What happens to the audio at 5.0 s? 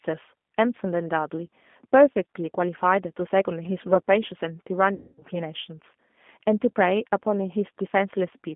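From 4.94 to 5.25 s the sound smears into a buzzy tone or coloured noise that fades and stays weak and distorted as normal audio resumes. This is VoIP packet loss concealed by the speech codec: about 240 ms of data went missing, consistent with eight lost packets, and the decoder kept extending its last pitch and vocal-tract filter at falling gain. Each frame depends on the one before, so recovery lags.

Across this moment the audio also has the rough, slightly synthetic, band-limited quality of the G.729 codec, roughly 200 Hz to 3.5 kHz. At 8 kbit/s it rebuilds the signal from a vocal-tract filter, a pitch predictor and a few pulses per frame instead of the original waveform.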